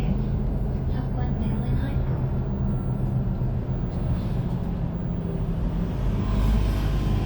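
No technical faults are audible anywhere in this recording of sounds.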